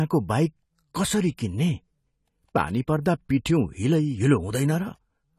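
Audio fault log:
Throughout, AAC compression: the speech sounds dull and smeared, with a fizzy, warbling edge on sibilants and held vowels, and nothing reaches above 14.1 kHz. This is likely AAC-LC coding at a low bitrate, which fits a rate of about 32 kbps. With so few bits per frame, the encoder drops the top of the band and quantises the remaining frequency lines coarsely, leaving holes and substitute noise that shimmer from frame to frame.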